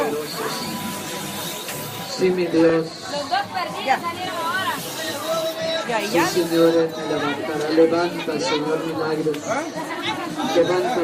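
At 2.69 s and again at 6.62 s there are repeated frames: a 30 ms block, which fits a run of about three compressed frames, plays twice, giving a brief stutter. Unlike a dropout or skip, nothing goes missing; each repeat adds 30 ms.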